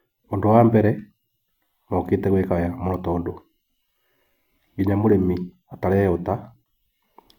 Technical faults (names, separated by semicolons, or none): none